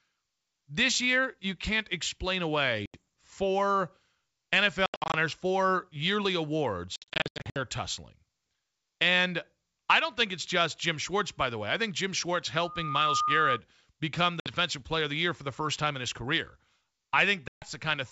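Speech over a G.722 call, clear and wideband, with packet loss on the ADPCM call. Hard silent holes appear at 2.86 s (after "year you can't explain"), 4.86–5.16 s, 6.96–7.59 s, 14.40 s and 17.48–17.65 s. After each hole the decoder's predictor has drifted, so the audio comes back slightly distorted before it settles.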